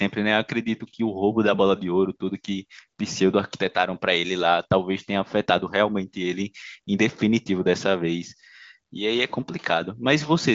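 Speech carried over the AMR wideband (HD Voice) codec at 23.05 kbit/s, a rate high enough to keep the coding roughness hard to hear, with the band ending near 7.4 kHz as that codec's wideband path allows, and no technical fault present anywhere in the audio.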